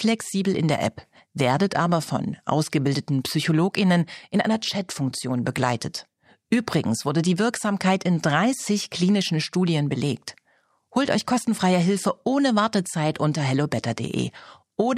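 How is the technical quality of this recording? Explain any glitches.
No glitches can be heard anywhere in this recording. There is nothing to explain.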